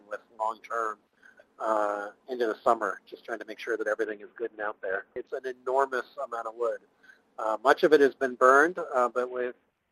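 The audio shows a Bluetooth SBC bit pool drop twice, from 4.04 to 5.30 s and from 9.28 s to the end. In both spans the treble goes dull and a gritty noise rises, which fits a congested link forcing the bit pool from 28 down to 5, about 54 kbps. Starved high sub-bands vanish while the rest are coarsely quantised. Unlike packet loss, there are no gaps or clicks, only a temporary drop in quality.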